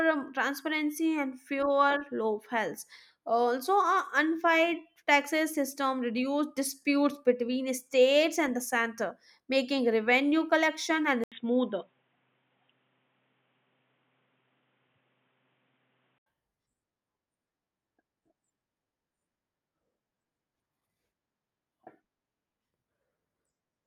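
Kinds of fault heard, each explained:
Input switched to a poorer device: at about 11.24 s the speech goes dull and boxy after a short 80 ms gap, with nothing above 3.8 kHz. It opens back up at 16.26 s. That pattern is most likely the recording path hopping to a narrower-band input, like a headset call profile, and then back. The level barely moves, and the new background noise is faint, sitting somewhere around 50 dB under the speech.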